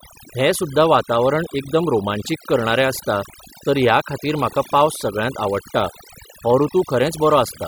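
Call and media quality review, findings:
Overdone noise removal, whole clip. Background near-silent with twinkling specks. Noise suppressor set too aggressive, switching off individual frequency bands near its noise estimate, taking quieter speech detail too. Unlike a noise gate, the floor never pumps in and out between phrases.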